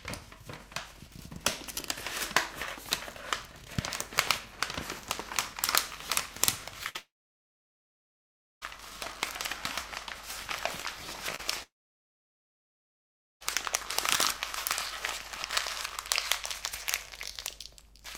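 At 6.83 s a short concealed packet loss leaves a brief smear. About 20 ms never arrived, and the receiver bridged it by extending the preceding sound. At 6.89 s a burst of packet loss removes 60 ms. The concealment holds the last sound and fades it, then playback jumps ahead. From 6.96 s to 8.63 s comes a long network dropout, likely from a stalled connection. A short fading tail gives way to roughly 1.55 s of silence, and the audio resumes with the intervening material missing. At 11.35 s a second short concealed packet loss, 40 ms, produces another quick wobble where the gap was filled. From 11.63 s to 13.42 s another long network dropout follows, with a brief concealment tail and then about 1.72 s of silence before the sound returns further along.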